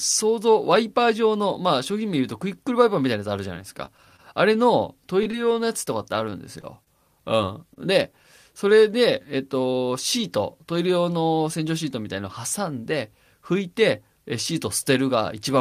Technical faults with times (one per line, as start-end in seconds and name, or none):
3.85-7.78 scattered short gaps